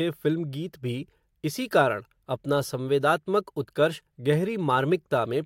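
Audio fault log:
No faults heard anywhere in this speech clip.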